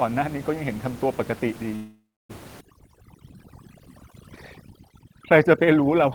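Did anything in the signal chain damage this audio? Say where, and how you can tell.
Yes, at three stages.

At the converter, sample clock jitter runs through the whole clip. A clock wandering by a couple of microseconds makes each sample land slightly off time, so the error scales with how fast the waveform is moving. It sits roughly 40 dB below the speech as a fine hiss and grit that thickens on loud, bright syllables and disappears in the pauses.

On the call path there is a call audio freeze from 1.75 to 2.31 s. The speech stops and the last sound is stretched into a fading buzz or hiss that drops to about 300 ms of silence before speech resumes exactly where it left off. Roughly 540 ms is inserted, nothing is lost, and everything afterwards runs 540 ms late. The likely cause is packets held up in the network until the jitter buffer emptied.

In call processing, overdone noise removal takes hold from 2.61 s to the end. 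The suppressor is cutting bands that sit near its noise estimate far too hard. The room noise, about 20 dB under the speech, collapses to near silence with twinkling specks. The quieter parts of the speech are cut along with it.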